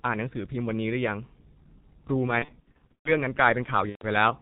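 Throughout, the speech carries heavy G.723.1 codec damage at 6.3 kbit/s: muffled, hoarse, smeared consonants, with a spectrogram showing nothing above 4 kHz and blurred formants.

From 2.39 to 3.12 s, VoIP packet loss concealed by the speech codec stretches sound into buzzy tones or coloured noise that fade. About 330 ms went missing across 660 ms, which fits eleven 30 ms frames, the longest run 120 ms. The waveform shows repeated, decaying cycles. A shorter 120 ms burst does the same from 3.89 to 4.05 s.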